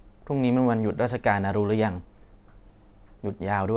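No faults are audible in the speech; it arrives over a normal call path with nothing above 4 kHz, a narrowband response that fits G.711 mu-law at 64 kbps.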